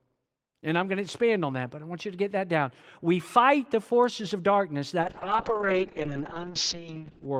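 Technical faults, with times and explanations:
5.02–7.40 s, call bitrate drop: the bandwidth estimate collapsed and the encoder coarsened, consistent with a fall from 32 kbps to about 6 kbps; the speech turns rough and watery, and the top end shrinks from 20 kHz to 8 kHz, muffling it through the end.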